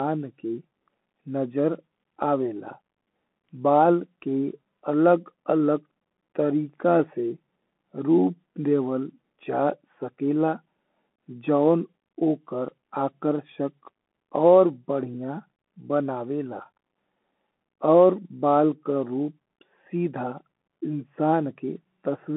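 Across the whole clip the speech has passed through a Bluetooth CVSD headset codec, whose one-bit slope coding, which fits a 64 kbps link, cannot follow fast changes, so loud high sounds distort; nothing above 3.8 kHz survives, the band sits near 250 Hz to 3.4 kHz, s sounds turn scratchy, and granular hiss persists.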